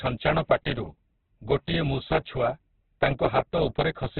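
Throughout the speech, the audio is band-limited with nothing above about 4.4 kHz, and every sound comes out rough, grainy and noisy rather than swirling or watery. That graininess, with no warbling holes in the spectrum, points away from MP3 toward Opus compression, likely at a very low rate near 8 kbps, where the encoder fills starved bands with noise and narrows its bandwidth, giving heavy damage across the whole clip.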